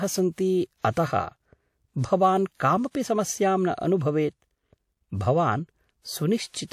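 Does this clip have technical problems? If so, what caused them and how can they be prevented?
Yes, there's pre-echo: short hiss smears in ahead of sharp attacks at 0.81 to 0.84 s, 0.92 to 0.97 s and 2.58 to 2.60 s, as the codec spreads each block's noise over the quiet moment before the onset. Encoding with shorter transform blocks on transients, or at a higher bitrate, would prevent it.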